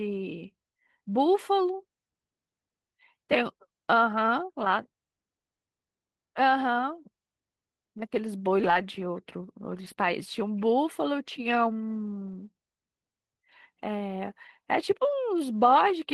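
At 8.59 to 8.69 s, a lost packet rebuilt from error correction: about 60 ms, which fits three lost packets, was replaced by the low-bitrate copy carried in the following packet. The sound never drops out. That stretch turns briefly rougher and grainier, then returns to full quality. The same thing happens at 9.83 to 9.93 s.

Right after, at 9.95 to 9.99 s, comes a short concealed packet loss. Here about 20 ms never arrived, and no backup copy existed. The decoder extended the preceding sound, following its pitch or continuing it as shaped noise, and then faded back into the real signal. The result is a quick smear or wobble rather than roughness, and a brief consonant can disappear entirely. That is the difference from the rebuilt frames: error correction keeps the real content but at low fidelity, while concealment invents a continuation of what came before.

At 12.27 to 12.33 s there is another error-correction rebuild, about 40 ms long, consistent with two lost packets. 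It is heard as the same short grainy patch with no gap.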